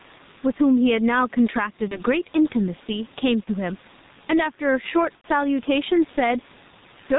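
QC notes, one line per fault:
Throughout, gain pumping: loud and soft parts end up closer in level and the sound is squashed, with the gain swinging by around 10 dB, while the room noise sits about 35 dB below the speech. The likely cause is input gain set far too high with a fast limiter clamping every loud syllable. On a waveform the envelope looks flattened, with loud and soft passages squeezed toward each other.
Throughout, G.723.1 codec: the speech is muffled and hoarse, consonants smeared, with heavy codec damage and nothing passing above 4 kHz. That fits a bitrate of around 6 kbit/s with 30 ms frames and a slowly updated vocal-tract model that cannot follow fast spectral changes. A spectrogram shows a hard ceiling at 4 kHz, coarse blocky formants stepping every 30 ms, and fricatives reduced to vague smudges rather than crisp high-frequency bursts.
1.88–2.01 s, 3.44–3.50 s and 5.15–5.25 s, VoIP packet loss concealed by the speech codec: at each point the sound is stretched into a buzzy tone or coloured noise that fades, then stays weak briefly after normal frames resume. 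The decoder was extrapolating from its last pitch and filter while lowering gain. The first two fit a single lost 30 ms frame, and the third fits about 90 ms lost. On a spectrogram, the frozen pattern tapers away. The waveform shows the repeated material shrinking in amplitude.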